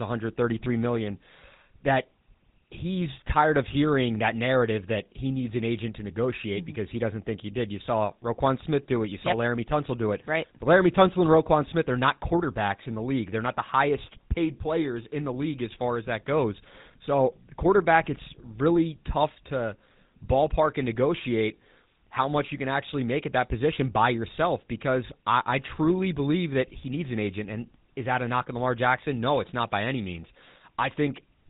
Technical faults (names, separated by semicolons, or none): GSM full-rate codec